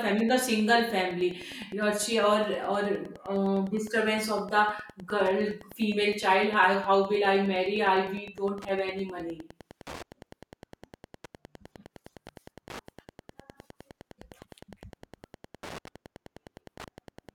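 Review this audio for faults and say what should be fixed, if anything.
Wi-Fi interference throughout: a steady tick every 102.4 ms, roughly 25 dB below the speech, as the audio circuit rectifies a nearby radio's beacon. Move Wi-Fi devices away from the microphone and preamp, and use shielded cabling with RF-filtered inputs.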